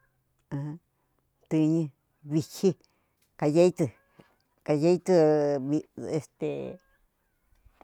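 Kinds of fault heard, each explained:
No kinds of fault are heard in this speech.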